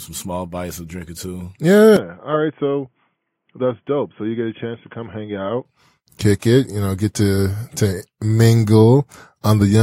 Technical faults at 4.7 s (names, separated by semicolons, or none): input switched to a poorer device